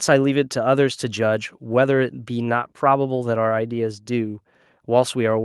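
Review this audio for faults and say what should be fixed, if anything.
Nothing needs fixing: the speech signal has unbroken continuity throughout, with no technical faults to report.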